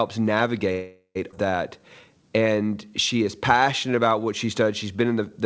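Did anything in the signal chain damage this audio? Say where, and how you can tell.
Yes. From 0.72 to 1.17 s the sound stops advancing and the last sound carries on as a fading buzz, ending in about 90 ms of silence. This call audio freeze is likely a network stall that emptied the jitter buffer. Unlike a dropout, nothing is lost afterwards: playback resumes exactly where it stopped, just later.

At 1.31 to 1.34 s there is a skip ahead. Playback jumps forward with only a tiny join, and about a third of a second of audio is gone. This is the network or jitter buffer discarding late or excess audio. The missing material, rather than an inserted gap, separates it from the freeze.

From 1.79 to 4.97 s a jitter buffer slow-down stretches the audio to 91% speed, adding about 0.3 s. Pitch stays the same while sounds drag, because single pitch periods are repeated to rebuild the buffer. That constant pitch rules out a tape-style speed error. 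The G.722 call path cuts off everything above 8 kHz throughout.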